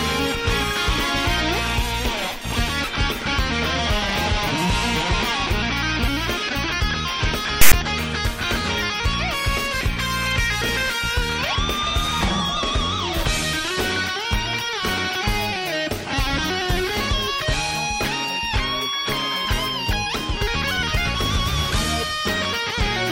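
File tags played as audio appear from 7.61 to 7.73 s, a burst of about 0.11 s. A block of text metadata has been decoded as though it were sample data. The character bytes produce a loud, harsh rasp with its level pushed to one side of zero, and the zero padding that follows in the block drops out to dead silence. The whole event starts and stops with hard edges, like a sudden slice of static cut into the audio.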